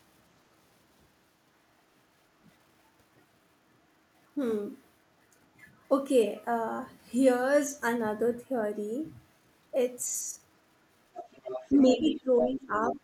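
Brief scraps of the other side's voice leaking through appear at 5.59–5.65 s and 6.38–6.44 s, very faint. They return much stronger from 11.15 to 12.15 s, at 12.41–12.48 s and at 12.77–12.96 s, and at 12.41–12.48 s they are nearly as loud as the talker. A distinct second voice rather than reverb points to loudspeaker echo the canceller likely left in the microphone signal. From 11.83 to 12.98 s, while that voice plays, the talker dips by about 10 dB for about a second in total. This is speech suppressed in double talk, likely the canceller turning down both sides at once, and unlike a plain level drop it coincides with the other voice.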